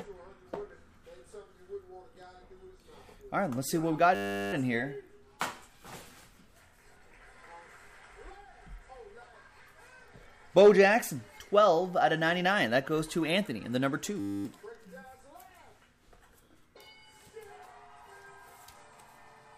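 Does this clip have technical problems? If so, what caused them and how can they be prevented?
Yes. There is a system hang loop: the driver stalled while the hardware kept replaying one 10 ms buffer, giving a steady 100 Hz buzz at 4.15–4.53 s and 14.2–14.45 s. To prevent it, keep the audio thread at real-time priority and update drivers so nothing blocks the buffer refill.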